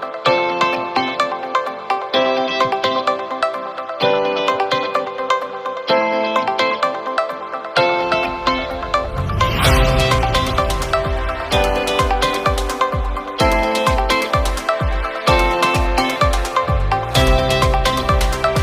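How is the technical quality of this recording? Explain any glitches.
Nothing to flag; no audible glitches anywhere in the recording.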